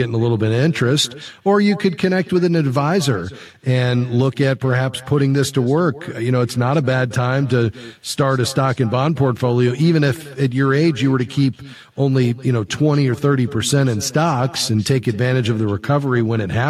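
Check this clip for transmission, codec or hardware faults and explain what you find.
There's one fault, running through the whole speech clip: echo with no canceller. The far end's loudspeaker feeds its microphone, so the talker returns about a fifth of a second later, roughly 20 dB down.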